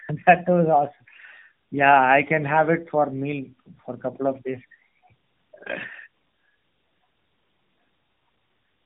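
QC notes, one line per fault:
Throughout: tandem speech coding. The speech has gone through a low-rate narrowband coder, been decoded, then been coded again by a second one, so the second pass worked on an already damaged signal. That's why it sounds rougher, duller and more warbly than a single hop would. Nothing comes through above 3.6 kHz, which fits mobile-style AMR coding at both ends of a call that crossed networks.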